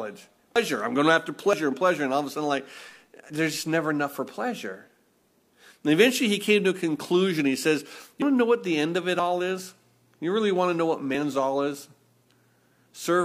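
The speech jumps forward six times, at 0.56, 1.53, 3.30, 8.22, 9.20 and 11.15 s. Each jump lands with no gap. These are likely dropped buffers (overrun), where audio was overwritten before it was read. The edges then butt together. The first loses roughly 0.15 s. The middle three lose about a tenth. The 8.22 s jump comes just before "want to know what". The later two are shorter, after "the end of it" and "want to know what".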